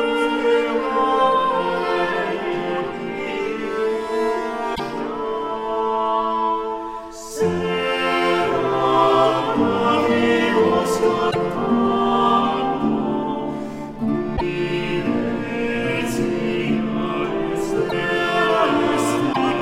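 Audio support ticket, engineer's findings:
Broken MP3 bit reservoir, likely: roughly 50–60 ms glitches with a jump ahead at 4.74–4.80, 11.30–11.36, 14.36–14.41, 17.88–17.93 and 19.32–19.38 s. Each spans about two 26.1 ms frames, which fits dropped frames leaving the following frames decoding borrowed bits from the wrong data.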